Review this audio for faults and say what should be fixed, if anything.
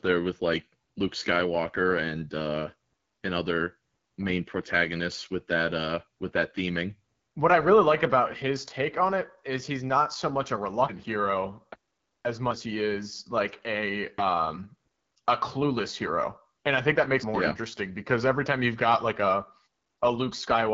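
Throughout, an AMR wideband (HD Voice) codec at a starved rate, which fits 8.85 kbit/s, leaves the speech rough and raspy, with nothing above 7.5 kHz. Run the link at 12.65 kbit/s or higher.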